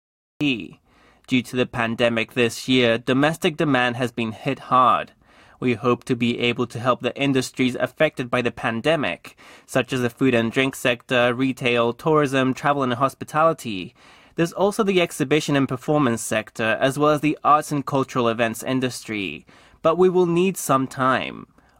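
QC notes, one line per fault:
0.00–0.41 s, cut-off start: the speech enters abruptly from digital silence at 0.41 s, mid-sound, with no natural attack because capture began late.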